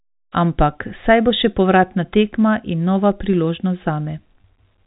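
Packet loss with pitch repetition occurs at 4.41 to 4.44 s, where about 30 ms of the speech goes missing, consistent with a single lost packet. The receiver fills the gap by repeating the last pitch period, so the sound briefly holds as a slightly buzzy, sustained tone before normal speech resumes.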